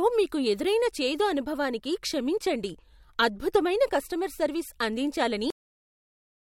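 At 5.50 s the recording hits a cut-off end: the final buffers of audio were never written out, so whatever the system captured after that point is simply missing. The speech stops mid-sound rather than trailing off, with no natural decay or room tail, and the remaining second or so, running to 6.55 s, is flat digital silence, so the ending sounds severed rather than finished.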